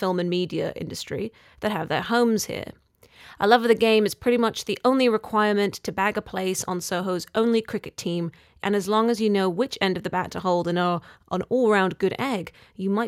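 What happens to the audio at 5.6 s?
Nothing goes wrong at 5.6 s; the audio plays through that moment intact, with no dropout, click or distortion.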